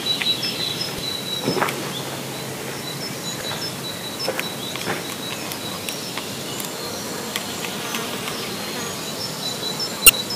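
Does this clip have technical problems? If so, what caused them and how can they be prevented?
Yes. Brief glitches at 0.98 s and 3.41 s, and a longer glitch from 10.06 to 10.10 s, come from damaged data in a compressed stream. Corrupted bytes made the decoder misread frames, lose sync and hunt for the next frame header. Checksummed transfer and verified storage would prevent this.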